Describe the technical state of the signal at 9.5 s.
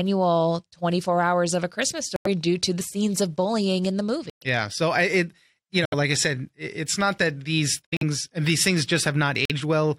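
At 9.5 s the decoder has thrown out damaged compressed data: bits inside a short run of frames were flipped, the frames failed to decode, and the player filled their slot with silence. This is a corrupt frame muted fault, running from 9.45 to 9.51 s. The speech cuts off abruptly into a 60 ms hole, which fits three 20 ms frames, then resumes with its timing intact, so nothing after the gap is shifted.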